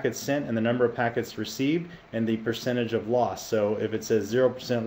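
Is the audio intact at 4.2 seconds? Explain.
Yes, the audio at 4.2 seconds is intact, with no fault to be heard at that moment.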